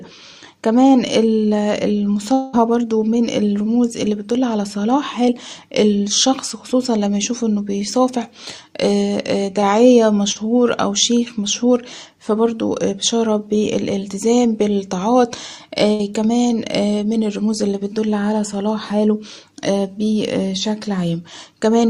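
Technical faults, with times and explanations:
2.33 to 2.55 s, long network dropout: the sound stretches into a fading buzz or hiss for about 0.2 s with no silence, then jumps ahead. Likely a stall in arriving audio, with about 200 ms never played and the receiver filling nearly all of it by extending the last sound.
10.32 to 10.37 s, short concealed packet loss: a brief wobble lasting a few hundredths of a second. About 40 ms failed to reach the decoder in time, and the receiver patched roughly 33 ms of it by continuing the preceding sound before blending back.
15.93 to 16.01 s, burst of packet loss: a held, fading smear, then an abrupt resumption. Several consecutive packets, about 60 ms in all, were lost or late, so the receiver stretched the last sound across the whole gap and lowered it, and the audio resumes without that section.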